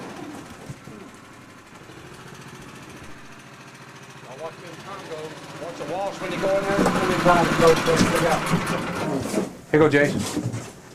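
No technical faults can be heard anywhere here.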